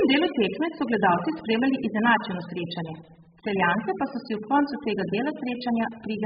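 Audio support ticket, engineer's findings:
Encoder starved of bits, likely a very low-rate AAC-LC stream, sound consistent with around 8 kbps. Heavy AAC compression throughout the speech, 0 to end. Lowpass at 5 kHz, nothing above. Quantiser discarding spectral detail frame by frame. Result: dull, band-limited speech, heavily degraded.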